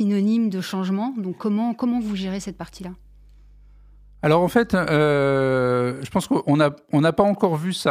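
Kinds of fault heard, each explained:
Mains hum: a steady low tone at 50 Hz, the power-line frequency leaking in through a ground loop or a nearby transformer. It sits about 30 dB under the speech, starting at roughly 1.9 s, just before "je pense qu'on n'a", and running until about 5.7 s.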